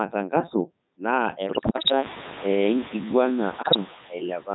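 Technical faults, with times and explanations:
Throughout: noise suppressor artifacts. A frame-by-frame suppressor is pulling down the bands it judges to be steady noise, by about 7 dB here, so the background dips in the gaps and swells back under the speech, with the room noise rising around 1.5 s.
Throughout: Codec 2 vocoder. The speech has passed through Codec 2 at 3.2 kbit/s, the top rate of this digital-radio vocoder, and the damage is heavy. Only pitch, voicing, energy and a coarse spectral envelope survive transmission, and the decoder rebuilds the sound from sine waves rather than the original waveform. That is why the speech sounds robotic and buzzy, and why the background noise sharing the channel is mangled.
1.46–1.92 s and 3.62–3.76 s: bit errors on digital voice radio. In both stretches, roughly one bit in ten arrives flipped, and because each bit at this rate steers the pitch, level, voicing or spectral shape of a whole frame, single errors throw entire frames off. 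The longer first burst and the brief second one break the synthetic speech into jumps in pitch and loudness, sudden changes of tone colour, bleeps and robotic gibberish before it settles again.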